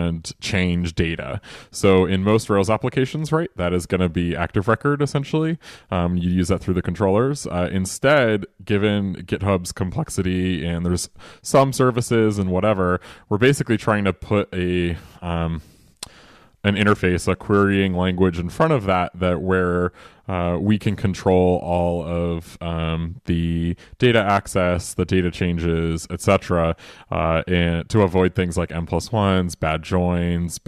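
No technical faults can be heard anywhere in this speech recording. The sound holds steady throughout, with nothing to point to at any moment.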